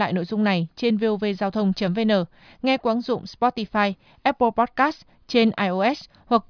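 No technical faults can be heard anywhere in this speech recording. There is nothing to place on a timeline or describe.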